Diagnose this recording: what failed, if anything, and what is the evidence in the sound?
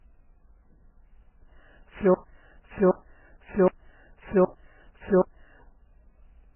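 Throughout, the speech is muffled, empty above 3 kHz, with layered smearing. This is likely transcoding between lossy codecs, where a low-bitrate first encode's cut-off survives later re-encodes.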